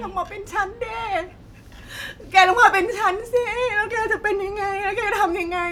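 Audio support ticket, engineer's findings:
No faults found; speech playback normal throughout.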